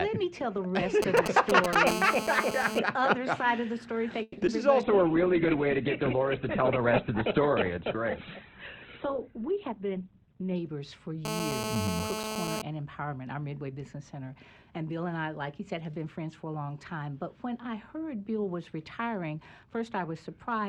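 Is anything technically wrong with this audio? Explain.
Yes, there's quite a bit going on.

From 1.02 to 1.75 s there are GSM signalling bursts: a galloping dit-dit-dit of short buzzes near 217 Hz, roughly as loud as the audio, from a nearby 2G phone's radio pulses getting rectified.

Then a steady GSM phone buzz, a raspy 217 Hz tone full of harmonics, runs from 1.87 to 2.79 s at about -6 dB, and again from 11.25 to 12.62 s at about -4 dB. That's the same rectification, but from a phone in an active call.

At 4.22 to 4.38 s you get a call audio freeze. The last sound is stretched into a fading buzz or hiss for about 150 ms, and then the audio picks up where it stopped, likely because delayed packets drained the jitter buffer.

Right after, from 4.46 to 4.48 s, there's a short concealed packet loss. It's a quick smear where about 30 ms of audio never arrived and the decoder patched over it.

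From 4.84 to 10.62 s there's a call bitrate drop. The encoder falls from 128 to 11 kbps and the bandwidth narrows from 20 kHz to 4 kHz, so everything turns muffled and rough.

Inside that stretch, from 9.28 to 10.45 s, a jitter buffer speed-up trims about 150 ms of pitch periods to cut the delay. The audio runs at 112 % speed with unchanged pitch, so it sounds hurried.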